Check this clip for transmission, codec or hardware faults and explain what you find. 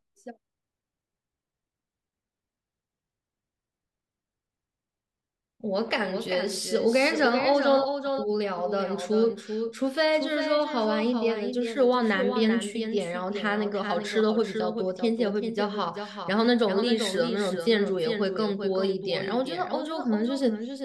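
One fault is present, a doubled audio track running through the whole clip. The speech is mixed in twice, with a second full-band copy trailing the original by around 400 ms at about 5 dB lower. The copy is dry, with no decay or room colour, so it sounds like a hard, detached repeat of every phrase. It likely comes from the signal being captured again through a slower path.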